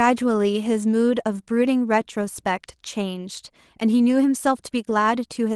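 Nothing goes wrong anywhere in this bit of speech, so there are no faults to point out.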